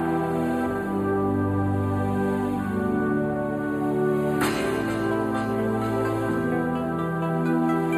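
Throughout, channel delay (comb filtering): one channel lags roughly 0.1 ms, so mono sum cancels near 5 kHz, sounding hollow; spectrograms show fixed notch bands.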